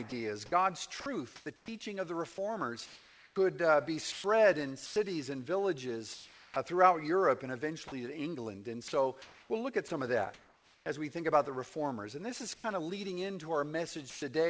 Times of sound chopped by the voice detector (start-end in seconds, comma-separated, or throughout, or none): 0.10-6.56, 7.88-10.86